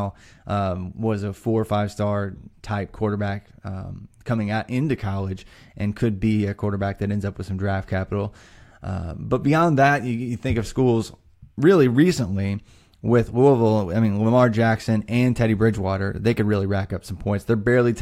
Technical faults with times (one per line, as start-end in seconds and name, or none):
none